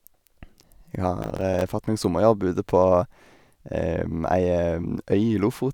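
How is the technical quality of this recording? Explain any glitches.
The recording has one glitch. From 1.22 to 1.62 s, processor overload crackle: roughly ten 5 ms buffers miss their deadline and drop to silence, giving gritty tearing, with gaps in the waveform and vertical broadband streaks on the spectrogram.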